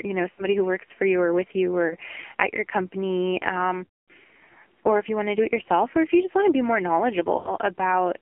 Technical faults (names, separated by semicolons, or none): AMR narrowband mobile codec; lost AMR speech frames